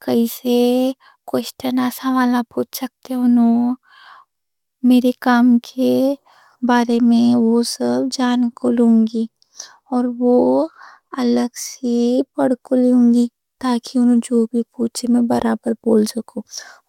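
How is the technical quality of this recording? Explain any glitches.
No technical faults can be heard in this recording.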